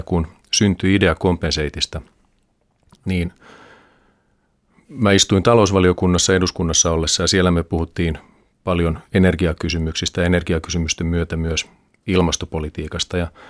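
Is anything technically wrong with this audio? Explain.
No, the recording holds steady throughout, with nothing in the signal that points to a technical problem.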